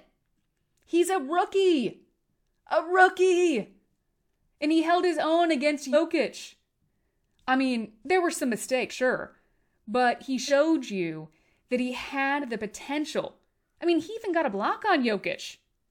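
At 5.92–5.96 s, 8.90–8.94 s and 10.47–10.51 s, compressed frames are skipped. About two 46.4 ms frames vanish and the speech jumps ahead.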